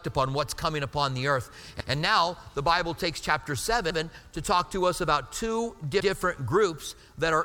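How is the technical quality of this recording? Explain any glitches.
There's one recurring glitch, overlapping chunks, at 1.80, 3.90 and 6.00 s. Each new 2-second chunk starts 100 ms before the previous one finished, so that slice plays twice at every join, giving a regular stutter-click roughly every two seconds.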